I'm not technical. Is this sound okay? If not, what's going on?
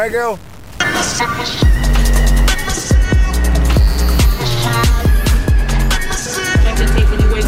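No. From the start to about 2.68 s, the sound is grainy and rough, and the quiet parts crackle or cut out. This is low bit depth without dither. The likely cause is saving it with too few steps, around 6 bits, with values simply cut off.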